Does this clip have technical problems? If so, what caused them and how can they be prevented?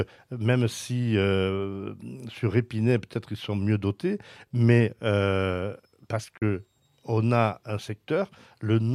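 Yes. This speech clip has AAC frame loss with muting from about 6.38 to 6.42 s. The sound fades out, dips briefly for about 43 ms, then fades back in. The gap length points to one lost AAC frame. The decoder replaced the missing frame's spectrum with zeros. The overlapping transform windows then tapered the audio into and out of that hole. To prevent it, protect the stream against packet loss with forward error correction or retransmission.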